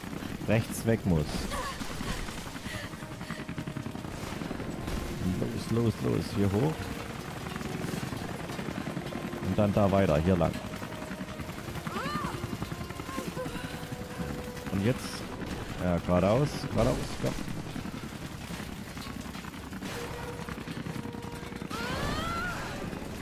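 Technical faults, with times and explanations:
Nothing stood out as a technical problem on listening to the audio.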